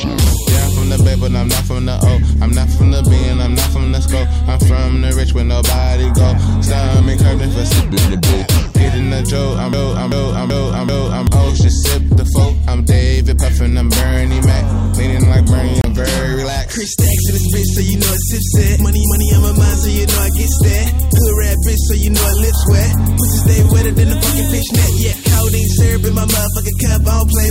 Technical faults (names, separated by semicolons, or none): broken-record loop; Bluetooth stall